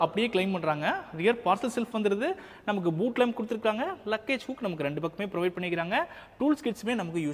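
Nothing in the audio stood out as a technical problem on listening.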